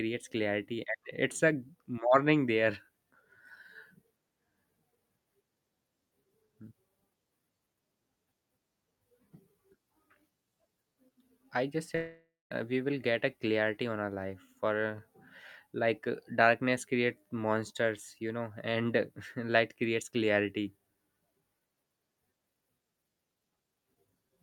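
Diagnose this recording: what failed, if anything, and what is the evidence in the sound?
The failure is at the network stage. After "I just", at 11.95 s, the sound turns into a buzzy continuation of the last sound that fades away. About 0.19 s of near-silence follows. Speech resumes at 12.53 s with "we will get a". Roughly 0.56 s of the original is gone and never returns. The cause is likely a long network dropout. Packets stopped arriving, and the receiver stretched the last audio until it ran out.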